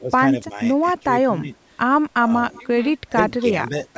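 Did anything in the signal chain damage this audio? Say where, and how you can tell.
Yes, in call processing. The speech sags from 0 to 0.59 s, 0.93 to 1.57 s and 2.14 to 3.73 s, about 10 dB down, nearer 15 dB at the end. That's likely speech suppressed in double talk: the echo canceller couldn't separate talker from loudspeaker echo and ducked both.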